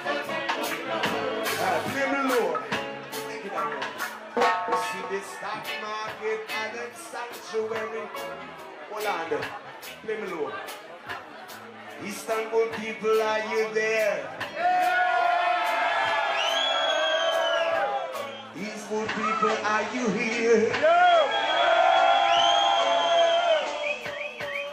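At 18.61 s hiss rises under the sound and the level shifts by about 3 dB over a cross-fade of roughly 0.4 s, staying that way until 24.33 s. This is digital radio blending to analogue: the hybrid receiver lost its digital stream and faded across to the same station's FM broadcast, whose narrower bandwidth and background hiss, around 25 dB below the signal, replace the clean digital feed.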